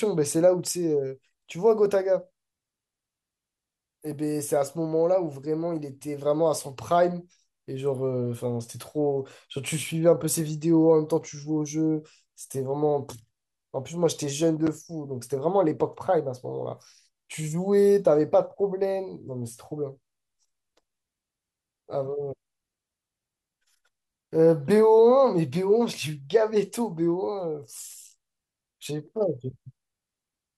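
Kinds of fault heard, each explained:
No technical faults can be heard in the speech recording. Nothing in the audio calls for an entry on any line above.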